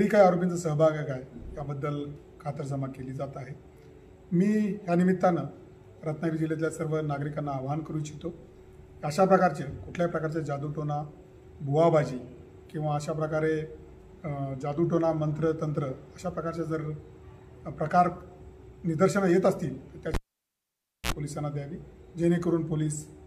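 A cable pulled and plugged in disrupts the audio from 20.14 s to 21.12 s. A live connection is yanked out, giving a sharp pop, then the sound collapses to near silence for about 0.93 s. As the plug goes back in, the tip touches before the connector seats fully, so a short burst of 60 Hz mains buzz lasting about 55 ms leaks through. A second pop follows as the signal returns.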